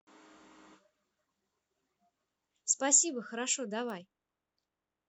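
Speech, with a single bit error spike at 3.90 s: one sample jumps to about -26 dBFS and snaps straight back, a flipped bit in storage or transfer. Unlike a buffer glitch, nothing drops out or repeats, leaving just one broadband tick unrelated to the signal.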